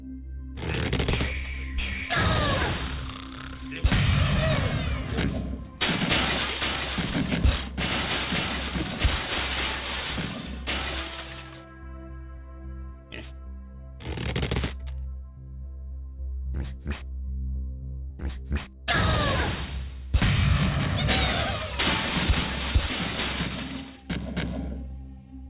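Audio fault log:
Throughout, aliasing: high content comes back gritty, folded to wrong pitches about 10 dB down, from downsampling without filtering above 4 kHz, which fits an 8 kHz rate.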